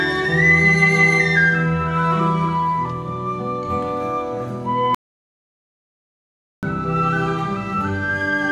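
Music playing normally cuts abruptly to dead silence from 4.95 to 6.63 s, about 1.68 s lost; an audio dropout to silence, likely from a momentarily lost input.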